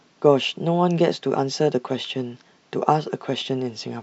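No technical faults can be heard anywhere in this speech recording. No dropouts, clipping, glitches or other disturbances interrupt the audio at any point.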